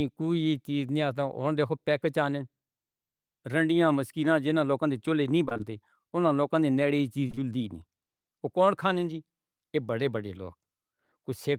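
From 5.45 to 5.61 s there is repeated packet loss, heard as robotic sound. What sounds like four short gaps, the longest about 27 ms, fall close together. Each is patched by extending the preceding speech. Roughly half that stretch is filled-in audio, so it turns choppy.

Short concealed packet loss follows three times in a row: 7.27 to 7.31 s, 7.31 to 7.35 s, and 7.35 to 7.39 s. Each hole is about 20 ms. The receiver continues the last sound across it, then blends back. Together they give a brief smeared wobble.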